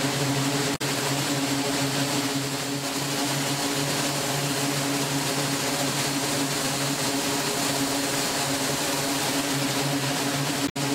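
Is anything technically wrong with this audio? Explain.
Yes. Damaged data in a compressed stream hits twice, at 0.72–0.82 s and 10.65–10.77 s. Corrupted bytes make the decoder misread frames and lose sync, giving brief chirps, squawks, clicks or short holes, which show as vertical broadband smears or gaps in the spectrogram and jagged discontinuities in the waveform.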